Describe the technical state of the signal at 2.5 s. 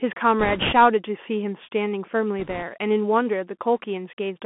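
At 2.5 s the signal carries bit errors on a Bluetooth voice link. The burst runs from 2.40 to 2.63 s. Flipped bits corrupt the one-bit up/down decisions, at a rate of around 2 percent. Each bit moves the waveform only a small step, and the adaptive decoder soon recovers. So there are no sharp clicks. Instead a rushing, crackly noise rides over the speech for that quarter second.

Underneath, the whole clip passes through a Bluetooth CVSD headset codec, plainly audible here too. The sound is confined to a narrow line band of about 200 Hz to 3.4 kHz. The character fits a 64 kbps CVSD stream, where each sample is a single step up or down and the step size adapts. Fast, loud high content outruns that step and distorts. S sounds turn scratchy, and a fine granular hiss sits under the speech.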